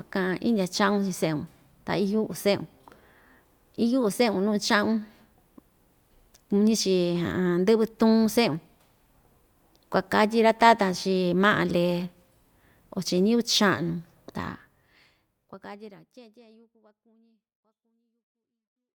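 Speech, with no technical faults to report.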